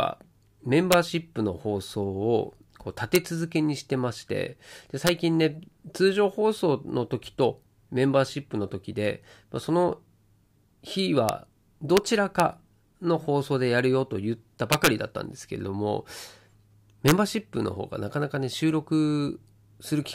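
Integer overflow cracks the loud peaks of this speech at 0.92, 3.15, 5.07, 11.29, 11.97 and 12.40 s, then from 14.73 to 14.87 s and from 17.08 to 17.12 s. In each, the level ran past the integer limit, by up to about 5 dB in the longest event, and wrapped to the opposite extreme instead of being held. Clipping would flatten those peaks into a dull buzz. Here each wrap jumps across the full range, so the sound is a violent, sharp crack.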